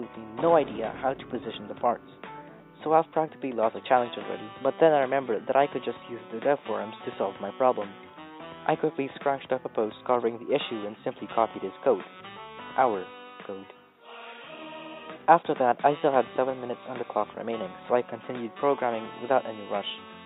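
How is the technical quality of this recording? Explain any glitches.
Nothing stood out as a technical problem on listening, so there are no glitches to explain.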